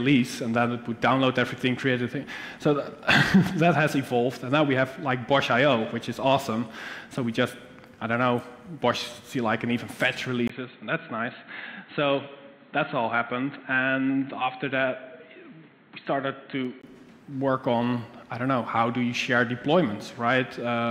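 Input switched to a poorer device, likely, from 10.48 to 16.83 s: after a 20 ms gap the audio turns dull, cut above 4.2 kHz, about 5 dB quieter, with faint new noise.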